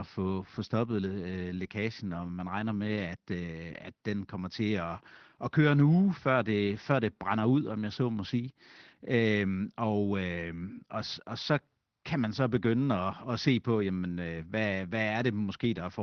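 No technical faults can be heard anywhere in the speech.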